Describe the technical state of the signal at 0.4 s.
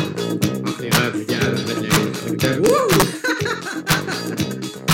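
At 0.44 s there is a single integer overflow: a peak in the sum or gain stage just crossed the largest integer value, by about 0 dB, and instead of being held at the ceiling it wrapped round to the opposite extreme. That full-range jump is heard as one sharp, violent crack. Clipping would flatten the peak into a duller, buzzy distortion; here the sample leaps across the whole range, so the click is far harsher and more abrupt.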